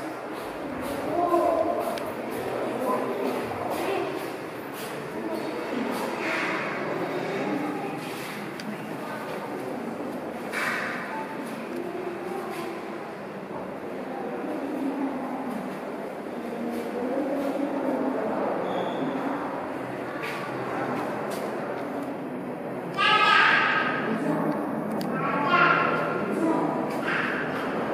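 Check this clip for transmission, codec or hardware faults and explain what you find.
Nothing here stands out as a transmission or hardware problem; the sound holds steady all the way along with nothing that needs flagging.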